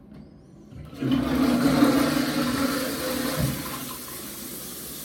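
No technical faults can be heard anywhere in this recording of sounds. Nothing in the audio points to a problem in how it was captured or delivered.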